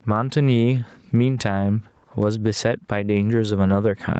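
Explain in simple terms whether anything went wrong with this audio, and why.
Gain pumping runs through the whole recording. Loud and quiet moments end up close in level, which makes the speech sound squashed. This likely comes from the microphone gain being set far too high, with a fast limiter constantly pulling it back down. The missing deep bass is just the call's normal microphone filtering.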